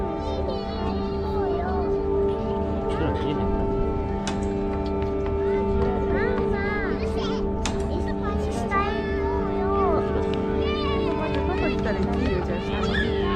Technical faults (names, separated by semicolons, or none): none